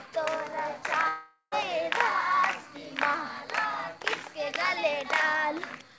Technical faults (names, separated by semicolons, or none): long network dropout